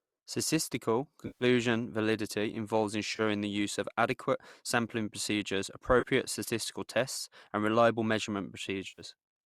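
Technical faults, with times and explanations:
1.27–1.44 s, 3.16–3.21 s, 6.00–6.04 s and 8.88–9.01 s: AAC frame loss with concealment. Stretches of roughly 130, 30, 30 and 100 ms of coded speech were lost, likely from the low-delay AAC stream, and the decoder rebuilt them from the preceding spectrum, giving smeared, noisy, phasey patches. On a spectrogram the harmonics blur into flat, hazy bands. On the waveform the envelope loses its natural syllable shape across each gap.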